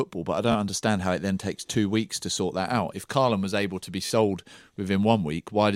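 At 0.52 to 0.55 s, between "but I" and "understand how it then", a Bluetooth stutter replaces about 27 ms of speech, and at 4.06 to 4.10 s, after "was able to be", about 40 ms is lost. Packets arrived late or not at all, so the receiver replayed its last short slice, producing a brief machine-gun buzz. That buzz sets it apart from a plain dropout, which would leave a silent gap. The loss lengths suggest two and three missed packets.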